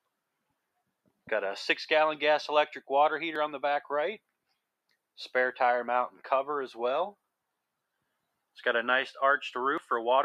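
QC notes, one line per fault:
3.36 s and 9.78 s, dropped buffer (overrun): the sound jumps forward abruptly at each point, skipping roughly 20 ms at the first and about 40 ms at the second. The likely cause is that the capture software fell behind and the hardware overwrote unread samples, so the audio on either side is butted together. Unlike a dropout or underrun, no silent gap is heard, only a sudden discontinuity and missing material.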